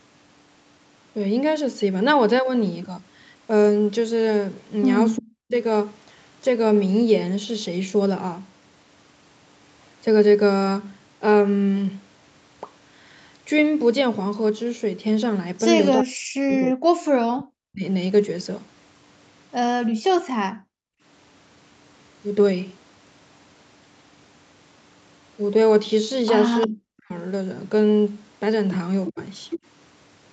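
From 5.17 to 5.55 s, and again from 15.97 to 17.84 s, the speech sinks by roughly 40 dB, once for a fraction of a second and once for about two seconds. This is likely speech suppressed in double talk: the echo canceller turned the near talker down while the far side was also speaking. On a waveform the envelope collapses almost to a flat line, and a spectrogram shows the harmonics fading out in a vertical band.

From 19.91 to 21.03 s the background is gated by the echo canceller. While the loudspeaker played, the canceller turned the microphone down, and the room noise drops by about 39 dB for around 0.7 s in total. These show as clean gaps cut into the noise floor.

At 26.61 s a brief echo leak likely lets a copy of the speech through, 350 ms late and roughly 15 dB below it. Another likely double-talk dip follows from 26.67 to 27.13 s. From 29.06 to 29.59 s a stronger, likely leaked echo returns at the same 350 ms delay, only about 10 dB below the speech, and a short, likely double-talk suppression dip from 29.09 to 29.18 s briefly cuts through it. 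On a spectrogram the echo looks like a fainter copy of the harmonic pattern, shifted right by 350 ms.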